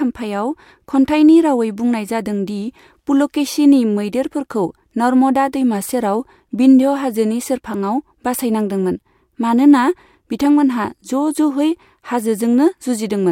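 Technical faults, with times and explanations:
No technical faults can be heard in the speech. There is nothing here to mark with a time or explain.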